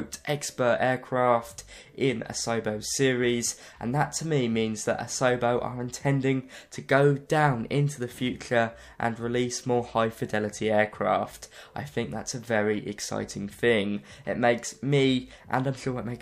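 No technical faults can be heard anywhere in this audio. There is nothing to place in time order, as no event interrupts or alters the sound.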